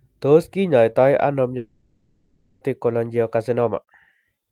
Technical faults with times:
1.57-2.63 long network dropout

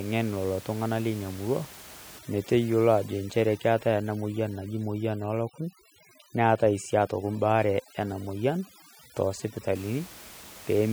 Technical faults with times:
2.19-9.75 overdone noise removal

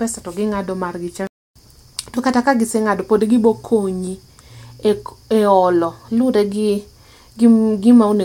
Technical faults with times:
1.27-1.56 playback stall

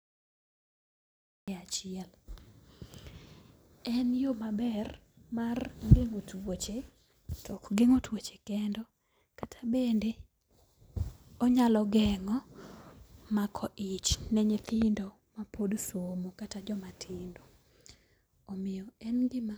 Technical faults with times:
0.00-1.48 cut-off start
9.43-9.45 loud pop
14.69-14.84 loud pop

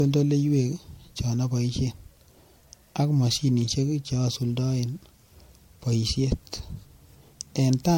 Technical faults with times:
0.00-7.97 generation loss

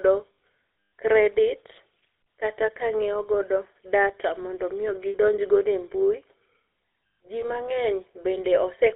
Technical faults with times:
0.00-8.96 GSM full-rate codec
0.35 lost GSM frames
5.09-5.16 lost GSM frames
7.40-7.46 lost GSM frames

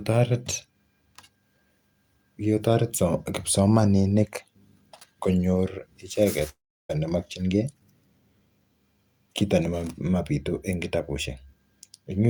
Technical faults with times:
6.49-6.91 long network dropout

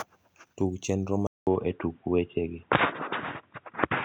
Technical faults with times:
1.27-4.04 input switched to a poorer device

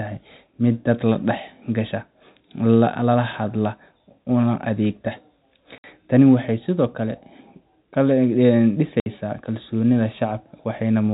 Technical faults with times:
5.78-5.84 packet loss filled with silence
9.00-9.06 packet loss filled with silence

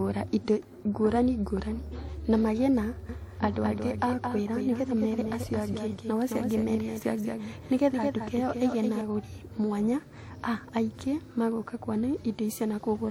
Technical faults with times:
3.09-9.01 doubled audio track

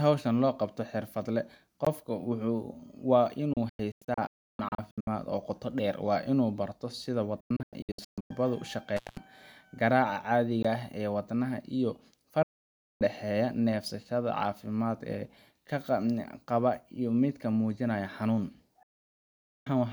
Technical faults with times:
1.85 block of digital silence
3.53-5.07 digital broadcast dropout
7.40-8.31 digital broadcast dropout
8.96-9.17 intermittent contact
10.63 block of digital silence
12.43-13.01 digital broadcast dropout
18.83-19.67 digital broadcast dropout

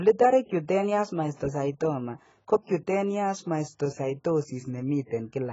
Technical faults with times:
0.00-5.52 AAC compression

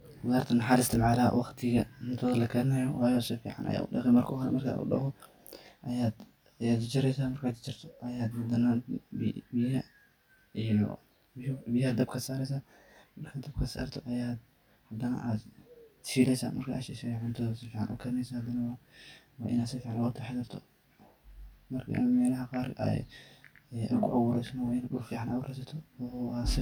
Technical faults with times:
0.00-26.62 channel delay (comb filtering)

